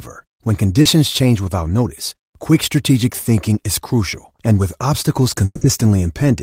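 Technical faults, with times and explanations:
0.81–0.87 s and 3.09–3.13 s, short concealed packet loss: about 40 ms and then 20 ms of the call arrived too late for the decoder, so the receiver extended the preceding sound and blended back in. This leaves a brief smear just before "change without notice quick" and again just before "thinking is crucial and".
5.45–5.63 s, long network dropout: the stream likely stopped delivering audio for about 160 ms after "crucial and with obstacles". The last sound carries on as a fading buzz or hiss and ends in roughly 30 ms of silence, and the speech resumes with that stretch missing.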